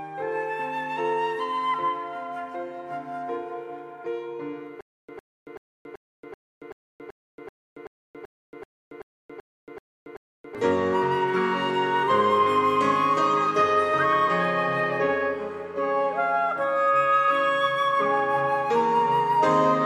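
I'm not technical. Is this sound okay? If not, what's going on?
No. From 4.81 to 10.55 s there's a stutter with silent gaps. A short 105 ms burst of the same sound repeats 15 times, each followed by about 278 ms of dead silence, so it pulses steadily every 383 ms. The player or stream likely stalled, replaying its last fragment at each retry, and the audio meant for that stretch is lost. Plain dropouts would just go quiet. Here the identical snippet keeps coming back.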